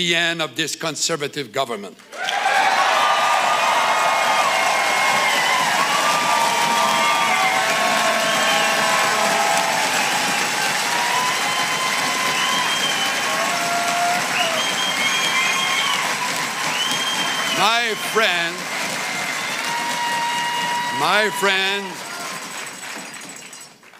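No technical faults are audible in this audio.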